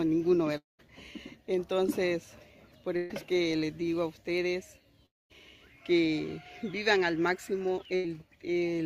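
From 0.57 to 0.81 s the sound fades into a held buzz or hiss, then goes quiet. A long network dropout is the likely cause. About 220 ms is lost.

From 2.97 to 3.12 s a burst of packet loss hides 140 ms. The last sound is held and fades, then resumes further on.

From 5.06 to 5.32 s the same fading fill drops into silence. About 240 ms is missing, again likely from a long network dropout.

From 7.96 to 8.06 s another burst of packet loss skips 80 ms under a brief fading fill.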